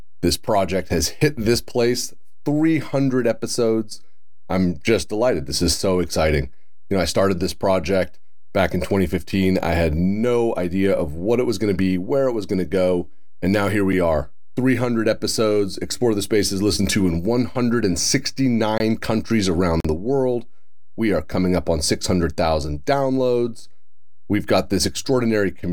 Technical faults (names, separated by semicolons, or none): DC offset; block of digital silence